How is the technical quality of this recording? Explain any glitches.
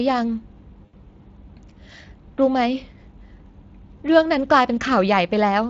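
Technical quality is held back by two things: codec damage across the whole recording and one short dropout early on.

The Speex codec coding runs from start to finish. The speech sounds noticeably hoarse and grainy, with that noisy CELP texture, which points to a middling bitrate of roughly 20 kbps. At that rate the codec doesn't have enough bits to model the excitation cleanly, so the natural breathiness of the voice gets replaced by a rougher, synthetic-sounding noise. Any top end above 8 kHz comes across as a loose, hissy fill rather than real detail.

At 0.85 to 0.95 s there's a glitch from VoIP packet loss concealed by the speech codec. About 80 ms of audio went missing, which fits four 20 ms frames. Instead of leaving silence, the decoder kept repeating its last pitch and filter settings and turned the gain down with each frame. You hear the sound briefly smear and fade, and because each frame builds on the one before, it takes a moment to come back to full strength after the packets return.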